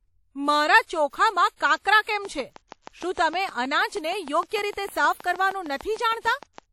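Throughout, the speech sounds washy and ringing, with hiss breathing alongside it and nothing above 19 kHz, likely WMA compression at a rate fitting 48 kbps. From 2.25 s, just after "કાંકરા કેમ", until 6.59 s, regular ticking at 6.5 clicks per second, around thirty in all, peaks about 5 dB above the speech, a train of clicks likely from interference or a faulty connection.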